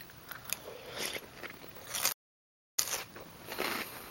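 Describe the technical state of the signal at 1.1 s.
At 1.1 s the signal is intact, with no audible fault at that moment.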